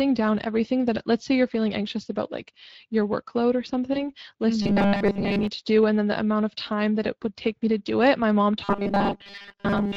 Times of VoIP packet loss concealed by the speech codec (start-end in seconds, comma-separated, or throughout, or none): 3.93-4.10